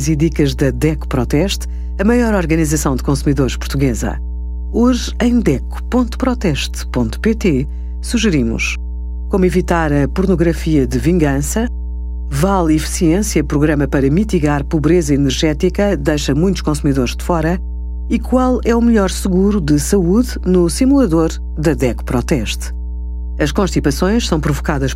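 From start to finish there's mains hum, a steady 60 Hz drone with low harmonics, sitting fairly high under the speech, probably a ground loop or nearby transformer.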